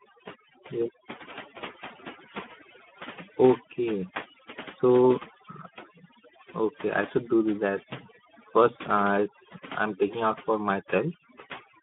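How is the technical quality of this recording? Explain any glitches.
The technical quality is poor. Two faults run through the whole recording, one stacked on the other.

Overdone noise removal affects the entire clip. A noise reduction stage set far too aggressively pushes individual frequency bands down or out whenever they sit near its noise estimate, and it takes softer parts of the voice with them. Pauses fall to near silence dotted with twinkling specks. Hiss-filled gaps or a steady wash would mean a weaker or missing reduction stage. Here the background is gone and its leftover fragments chirp, which marks it as over-processing.

The Speex codec is also present from start to finish. Speex is a CELP speech coder from older VoIP and game chat, and here it is starved of bits for the excitation signal. The damage is plainly audible as a hoarse, rough, noisy texture on the voice, which fits a bitrate around 11 kbps. 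The band runs from about 150 Hz to 3.5 kHz with nothing above 3.7 kHz, a classic telephone-width line. A plain band-limit would sound dull but clean. The grainy, buzzy roughness inside the band is what points to a low-rate CELP codec.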